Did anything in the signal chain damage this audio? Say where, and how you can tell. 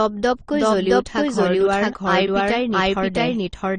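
Yes, two things. The first is a doubled audio track running through the whole clip. Underneath the speech there's a second, full-band copy of the same material trailing by roughly 0.7 s, and it's about as loud as the original. It has no reverb tail and no room colouring, so it isn't an echo. What you're hearing is the same signal summed twice. The likely cause is a slower second capture path feeding the mix, or an edit that left two copies out of step.

The second is transcoding between lossy codecs, at the codec stage, and it's also present throughout. Nothing survives above 17.4 kHz. The speech carries a mix of artefacts that don't come from any single encoder. There are artefacts from an earlier low-rate AAC pass, and on top of that a final Opus encode spent its bits reproducing those flaws and then added its own. That stacking of different artefacts points to an AAC-then-Opus chain.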